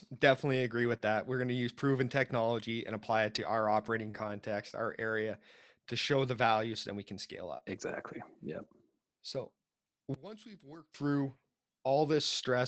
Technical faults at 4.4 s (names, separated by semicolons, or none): scattered short gaps